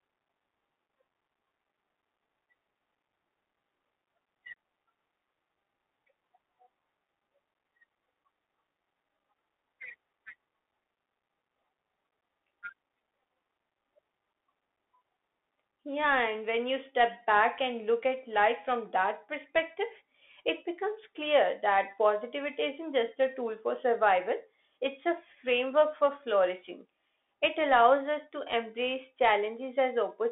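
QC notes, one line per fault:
Throughout, Bluetooth CVSD headset codec: the speech is squeezed into a narrow telephone band of roughly 250 Hz to 3.5 kHz, so it sounds thin and boxy with no real low end or air. The codec codes one bit per sample, stepping up or down with an adaptive step size, which fits a 64 kbps link. Fast loud high content outruns the step, so s sounds come out scratchy and a granular hiss sits under the voice.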